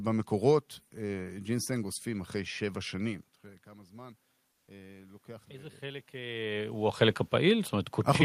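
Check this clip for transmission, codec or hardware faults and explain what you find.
Two faults turn up, both in the middle of the clip, alongside some normal room noise and the talker shifting position around 3 s and again near 6 s.

Automatic gain rising, 3.44 to 6.8 s: after the input falls by about 20 dB, the gain control slowly adds about 7 dB to compensate. Voice and background swell together. On the waveform, the envelope and the noise floor climb steadily as one.

Comfort noise in place of the background, 4.51 to 4.67 s: for 160 ms the real background, which sits about 51 dB below the loudest passages, is replaced by a flat, featureless hiss about 2 dB quieter. The likely cause is discontinuous transmission, consistent with Opus DTX, with the receiver filling the pause with synthetic noise. A spectrogram shows a smooth, uniform patch in place of textured noise.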